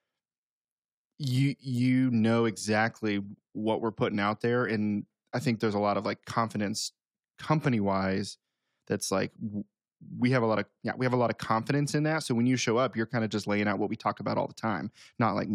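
No technical faults are audible.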